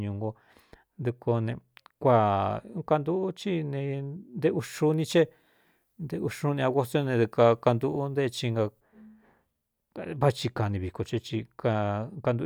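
From 4.59 to 8.80 s, pre-emphasis is left on. The treble boost was never undone, leaving about 8 dB extra at 10 kHz. The speech turns thin, bright and sibilant.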